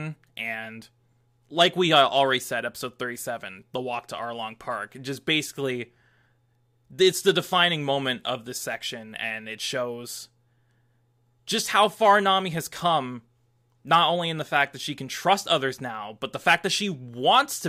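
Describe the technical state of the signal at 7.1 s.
At 7.1 s the speech signal is intact, with no audible fault at that moment.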